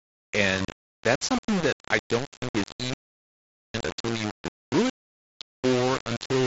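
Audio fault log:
throughout: low bit depth without dither. Every sound carries a coarse, grainy distortion that shifts with the speech, loudest in texture on quiet syllables and decays, where the signal crumbles into rough steps or sputters. The likely cause is quantisation to around 4 bits by plain rounding, with no dither to decorrelate the error, so the error tracks the waveform and sits only about 10 dB below the speech, well above the light graininess of the mSBC headset link, which passes nothing above about 7.7 kHz.
2.94–3.74 s: audio dropout to silence. The speech cuts off abruptly at 2.94 s and returns mid-flow at 3.74 s, leaving about 0.81 s of silence with no room tone or noise floor underneath. That points to the input being lost while the recording chain kept writing silence, likely a brief disconnection or mute upstream of the encoder. Whatever was spoken in that span is not recoverable from the clip.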